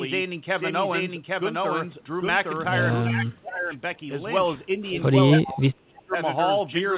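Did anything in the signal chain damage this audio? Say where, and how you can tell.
Yes. The most obvious problem is a doubled audio track. A second capture path or an edit has likely mixed in a second copy of the whole recording, running about 0.7 s behind the original. You can hear it across the full clip: the speech is followed by an identical, full-band copy at roughly the same loudness. The copy has no decay and no room colour, so it sounds like a repeated recording rather than acoustic reflection.

The call processing also damaged the speech through speech suppressed in double talk. When both sides talked at once, the echo canceller likely could not tell the near talker from the loudspeaker echo and turned everything down. The speech sinks sharply from 3.01 to 3.73 s and again from 5.36 to 6.16 s. The deepest dips are around 25 to 30 dB, which leaves the voice hollowed out or chopped for most of each stretch.

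An echo leak appears inside the second dip, from 5.50 to 5.57 s. Here the echo canceller at a far-end loudspeaker likely let part of its microphone pickup pass back into the call. The result is a brief scrap of voice trailing the original by 311 ms, about 15 dB below the speech. Its delay differs from the 0.7 s doubling, so it is a separate fault. All of this sits inside the narrowband call audio, with nothing above 4 kHz.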